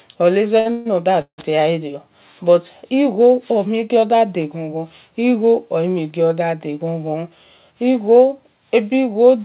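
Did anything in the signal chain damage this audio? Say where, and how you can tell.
Yes, at the network and jitter-buffer stage of the call. A short stall from a late packet at 0.60 to 0.67 s holds the last sound about 54 ms too long with a slight buzz or dip, then resumes from the same point. It is too brief to fade, which sets it apart from a freeze.

Call audio freezes at 0.71 to 0.87 s and 1.21 to 1.40 s stretch the sound into a buzz or hiss. The second buzz decays into about 90 ms of silence. This is likely packets held up in transit, emptying the buffer. Because the audio resumes exactly where it stopped, no content is lost, unlike packet loss. Over the 4 kHz band of the G.711 call path, these two freezes add about 140 and 165 ms of delay.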